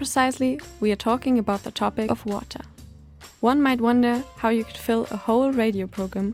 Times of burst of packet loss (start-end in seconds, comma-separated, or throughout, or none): none